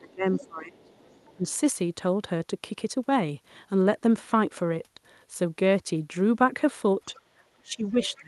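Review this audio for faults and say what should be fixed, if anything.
The echo canceller likely could not tell the near talker from loudspeaker echo during double talk and turned the near speech down. This speech suppressed in double talk shows as drops of up to about 20 dB from 0.0 to 0.91 s, about 15 dB at 1.36 to 1.46 s, a slight dip at 7.05 to 7.11 s, and up to about 25 dB from 7.56 s to the end. Tuning the double-talk detector to hold near-end gain while both sides speak would prevent it.

Residual loudspeaker echo was likely not fully cancelled from the microphone, so the other side's voice leaking through sits faintly under the speech, about 25 to 30 dB below it, at 0.33 to 1.53 s, 7.15 to 7.2 s and 7.92 to 8.2 s. Better echo-path modelling, or a headset in place of the loudspeaker, would stop it.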